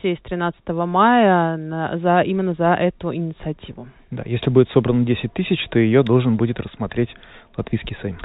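There are no technical faults to describe in time order in this speech recording, which comes through G.711 telephone coding as expected.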